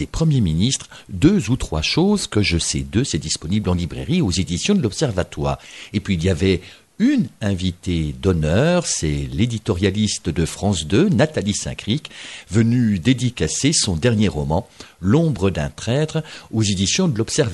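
No technical faults can be heard anywhere in this audio. Nothing in the sound points to a problem with how it was captured or carried.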